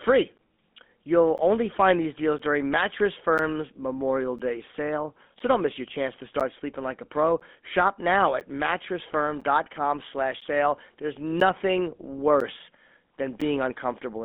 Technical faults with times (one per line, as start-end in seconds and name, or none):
0.00-14.25 GSM full-rate codec
0.38-13.42 periodic USB or driver dropouts